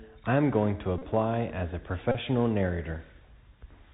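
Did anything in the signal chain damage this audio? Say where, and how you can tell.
Yes. Throughout, the speech sounds dull, grainy and scratchy on s sounds: the Bluetooth CVSD headset codec, a one-bit adaptive-step coder, caps everything near 4 kHz.

At 0.98 to 1.02 s and 2.12 to 2.16 s a short buzz near 267 Hz appears. The Bluetooth headset link lost packets, and the last packet was repeated every 3.75 ms.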